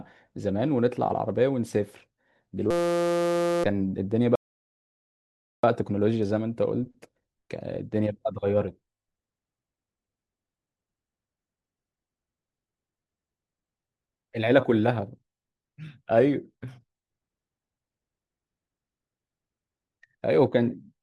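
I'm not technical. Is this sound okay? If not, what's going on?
No. A system hang loop runs from 2.71 to 3.64 s. The computer froze for a moment, but the sound hardware kept replaying the last tiny scrap of audio it held, a slice only 5.8 ms long, over and over. Repeated that fast, about 172 times a second, the scrap turns into a steady buzzing tone instead of speech, and roughly a second of the real speech never gets played at all.

A rebuffering stall follows from 4.35 to 5.63 s. The player ran out of audio it had downloaded and waited for more to arrive, so the speech drops to silence and then picks up exactly where it stopped. No speech is missing, but the pause adds 1.28 s to the clip's running time.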